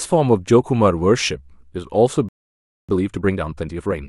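A playback stall hits at 2.29 s: the speech cuts off mid-flow and the output stays silent for about 0.60 s, until 2.89 s. The gap is dead silence rather than a fade or a glitch, and the speech resumes abruptly. The player likely ran short of incoming data, or its output thread was held up, so nothing reached the output until it recovered.

Time-compressed catch-up follows from 2.89 s to 3.99 s, as the player works off the backlog built up during the silence. Instead of skipping ahead, it removes small slices of the speech and cross-fades the remaining pieces together, so delivery runs at 1.5 times normal speed while pitch stays unchanged. The result sounds rushed before playback settles back to normal pace.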